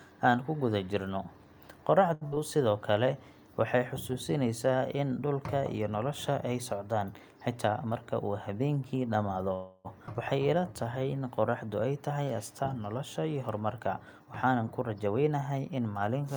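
At 2.13 to 2.23 s there is a short stall from a late packet. The jitter buffer ran empty. The last sound is held for 78 ms, then speech resumes with nothing lost.

A burst of packet loss follows at 2.27 to 2.34 s. The sound is stretched for 48 ms and fades. Then about 40 ms of speech is simply gone.

From 7.47 to 8.51 s a jitter buffer speed-up runs at 107%. Short pitch-period pieces are cut, roughly 70 ms in all. Speech sounds hurried at unchanged pitch.

At 9.53 to 9.87 s the call audio freezes. The last sound continues and fades for 311 ms without reaching silence. Then speech picks up where it stopped. Packets held up in transit are the likely cause.

At 10.07 to 10.09 s the playback skips ahead. Roughly 150 ms of speech is dropped. The two sides are joined almost directly, with a tiny 7 ms fill.

From 10.42 to 11.67 s a jitter buffer slow-down plays at 90%. Repeated pitch periods add 130 ms. 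Sounds are drawn out, with the pitch unchanged.

From 13.54 to 15.79 s another jitter buffer speed-up runs at 109%. Roughly 200 ms is removed. The speech sounds hurried.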